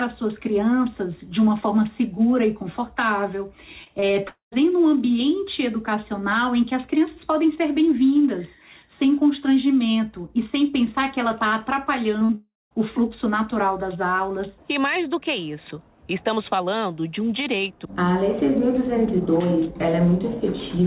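At 3.84, 3.88 and 4.00 s the sound briefly smears and wobbles for about 20 ms each time. This is short concealed packet loss: those slices of the stream missed the decoder, which filled each gap by extending the preceding sound before blending back into the real signal. The same smearing returns at 12.20 and 12.25 s, the second patch lasting about 40 ms, long enough for a brief sound to be lost.

From 4.28 to 4.54 s the sound is replaced by a fading continuation of what came before, ending in roughly a tenth of a second of silence before the audio resumes with a piece missing. From 12.35 to 12.73 s the same thing happens, with about 0.19 s of silence. Each is likely a long network dropout: nothing arrived, concealment stretched the last sound until it faded, and the lost stretch was never played. Throughout, nothing above 4 kHz is present, consistent with a narrowband telephone codec such as G.711.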